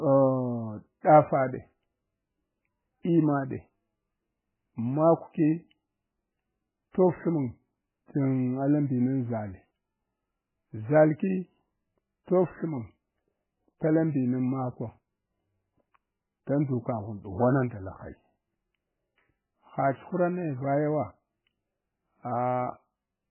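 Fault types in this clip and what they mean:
MP3 compression: throughout the speech, nothing comes through above 3 kHz and the sound is heavily watery and swirling. The likely cause is MP3 encoding at a very low bitrate, around 8 kbps, which strips the treble and lets weak frequency lines flicker between frames.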